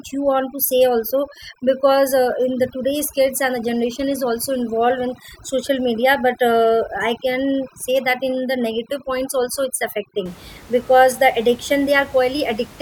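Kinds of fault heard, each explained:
Overdone noise removal: from 0.0 to 10.26 s the background drops and breaks up into twinkling specks, because an over-aggressive noise reducer shuts off single frequency bands near its noise estimate, taking quiet parts of the speech with them.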